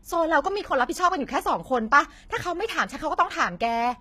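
Throughout the speech, the treble sounds gritty and lispy. The s sounds are metallic. The likely cause is HE-AAC compression at a very low bitrate, near 20 kbps. The codec rebuilt the treble from copied lower bands. Its harmonics do not match the original.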